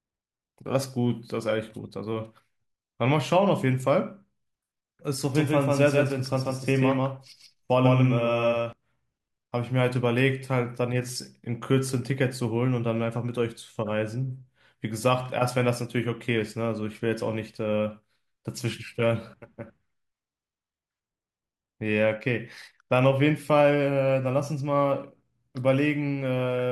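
From 5.35 to 8.73 s the speech carries a doubled audio track: a second copy roughly 150 ms late at about equal level, likely from a slower capture path, starting and stopping abruptly.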